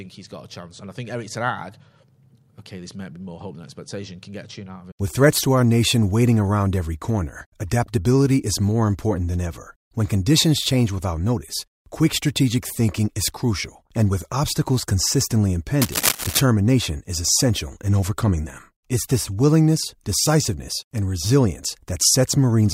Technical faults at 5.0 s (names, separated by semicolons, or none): none